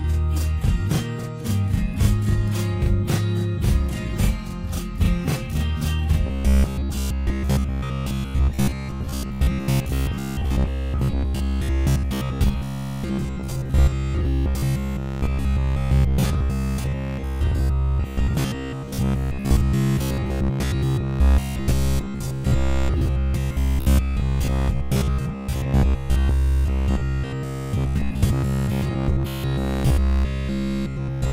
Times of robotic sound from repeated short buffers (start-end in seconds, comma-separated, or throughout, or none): 6.27-31.33